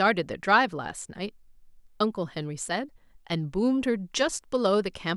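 No technical faults are audible.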